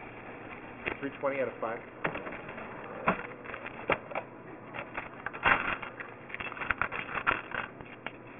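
Aliasing runs throughout the clip, from start to finish. The sound appears to have been cut to a much lower sample rate, which fits a drop from 48 kHz to 6 kHz, with no filter first removing content above the new limit. Everything above 3 kHz folds back below it onto unrelated pitches, nearly as loud as the genuine sound, so bright parts turn gritty and metallic and the spectrum crowds hard against a 3 kHz ceiling.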